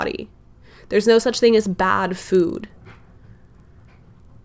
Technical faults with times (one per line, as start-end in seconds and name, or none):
2.25-4.44 resampler restarted on every block